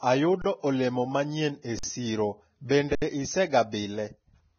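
Throughout, the speech is hissy and grainy with nothing above 6.5 kHz, likely Vorbis compression at a low bitrate. Treble is replaced by noise rather than simply dulled. At 0.42 to 0.44 s, 1.79 to 1.83 s and 2.95 to 3.02 s, an underrun with held sample freezes the waveform flat for 23, 46 and 70 ms, which fits 1024- to 3072-sample buffers running dry. The sound stops without the click of a dropout and resumes where it paused. Pre-echo at 1.62 to 1.65 s, 2.69 to 2.71 s and 3.71 s puts a brief hiss of 28, 20 and 14 ms before sharp attacks, softening them. This hiss comes before the attack, not after it as a true echo would.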